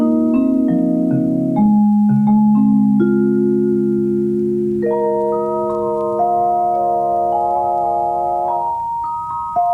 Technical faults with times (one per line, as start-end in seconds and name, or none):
none